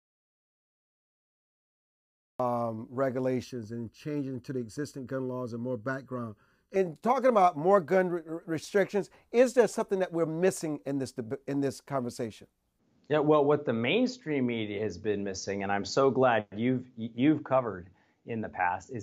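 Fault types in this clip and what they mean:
Audio dropout to silence: The clip opens in silence, with no room tone or hiss, until the speech starts abruptly at about 2.4 s. This dead gap is already in progress when the clip begins. The likely cause is that the input signal was lost, through a disconnected device, a broken link or an accidental mute, while the recorder kept writing silence. Anything spoken during that stretch is missing.
Channel delay (comb filtering): From 3.44 s to 6.76 s the speech turns hollow and phasey, thin in the lower midrange, then clears just before "talking about more gun". One channel arrives roughly 0.7 ms behind the other, and summing the two to mono cancels their shared content at evenly spaced frequencies. The first notch falls around 700 Hz, with further notches repeating about every 1.4 kHz up the spectrum.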